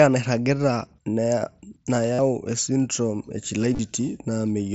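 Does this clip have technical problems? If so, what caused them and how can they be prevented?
Yes. Concealed Bluetooth headset packet loss occurs twice. At 2.14 to 2.19 s, about 52 ms of audio goes missing in one run. The receiver fills the gap by repeating the closest-matching recent waveform, so it turns into a brief buzzy held tone with a slight warble as the sound resumes. At 3.73 to 3.79 s, 45 ms is lost in short bursts spread over 60 ms, none longer than 15 ms. To prevent this, keep the headset close to the phone, with a clear line of sight and less 2.4 GHz interference.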